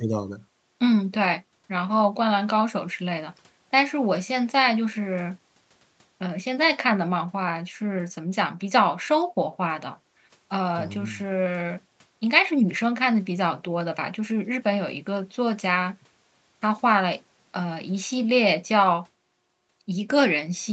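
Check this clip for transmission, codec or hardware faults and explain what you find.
Nothing stood out on listening to this speech, which carries the expected call-path character, with the top of the sound ending at about 8 kHz.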